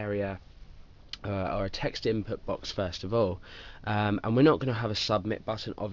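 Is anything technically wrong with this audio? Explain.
Yes. Aliasing runs throughout: the sample rate was reduced without an anti-alias filter, so content above 6 kHz folds back below it. The result is gritty, metallic high-frequency energy, roughly 15 dB below the main sound, and a spectrum cut hard at 6 kHz, which fits a 12 kHz rate.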